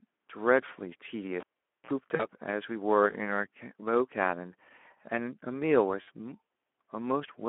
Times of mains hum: none

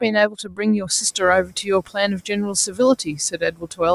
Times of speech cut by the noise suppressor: 0.01-2.80, 3.31-3.81

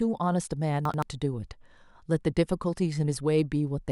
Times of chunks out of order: 0.85-1.02

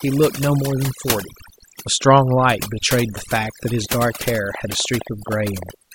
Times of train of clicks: 4.55-5.70

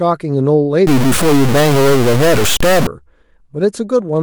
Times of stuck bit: 0.87-2.87

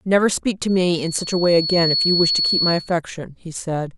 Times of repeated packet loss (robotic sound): none

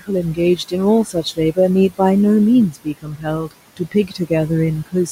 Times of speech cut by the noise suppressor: 0.00-0.74, 1.04-1.58, 2.71-3.27, 3.70-4.31

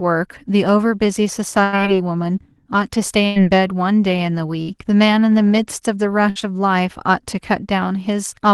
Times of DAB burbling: none

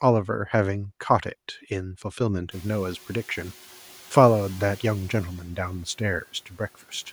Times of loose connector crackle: none

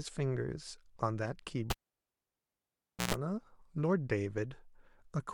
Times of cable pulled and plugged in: 1.70-3.14

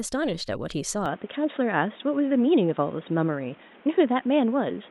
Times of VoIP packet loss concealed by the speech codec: none

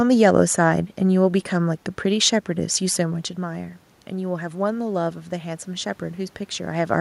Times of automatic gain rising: 2.46-5.95

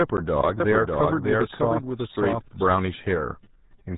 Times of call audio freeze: none

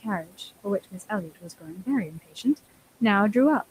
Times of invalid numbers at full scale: none

